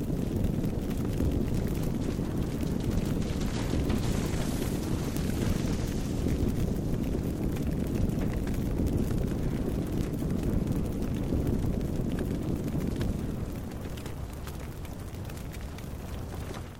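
From 0.21 s to 16.77 s, the sound carries word clock ticks: sharp clicks of uneven strength recurring at a steady rate of about ten per second, roughly 150 in all. The pattern indicates a digital link being read by a receiver running on its own clock rather than locked to the sender's, with the two clocks differing by roughly 200 ppm. Each time they slip past one another, a few samples are misread and one sample is dropped or repeated, producing a tick.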